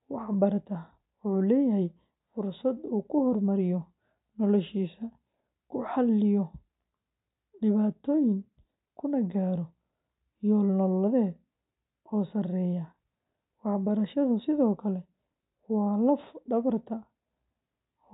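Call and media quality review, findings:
No faults found in the speech audio. Nothing audible points to a problem in the capture, transport or playback path.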